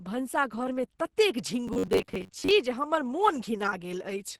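Across the whole clip the speech sounds hoarse, grainy and muffled, with consonants roughened and nothing audible above about 12 kHz. This is Opus compression, likely running in its hybrid speech mode, with a low-rate speech coder carrying the lower band and only coarse band energies rebuilding the top. The heavy damage and the super-wideband ceiling fit a very low bitrate of about 12 kbps.

From 1.68 s to 2.53 s the speech turns into a rigid, metallic drone pinned at about 94 Hz, still loosely tracking the syllables. This is robotic sound from repeated short buffers, likely caused by audio arriving late so that the playback side loops a fragment of about 10.7 ms to bridge the gap. Roughly half of that stretch is repeated material, and the real audio it replaces is lost.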